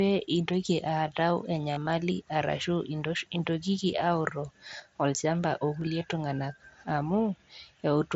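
From 1.71 to 1.87 s, concealed Bluetooth headset packet loss leaves 75 ms of gaps over 165 ms. The receiver fills each gap by repeating the best-matching recent stretch of waveform. The longest run, 22.5 ms, gives a brief buzzy, held tone. A spectrogram shows smeared, repeated harmonic stripes, and the waveform shows copied cycles at steady level. At 5.81 to 5.87 s, shorter losses (at most 7.5 ms) are nearly hidden within the wideband mSBC link.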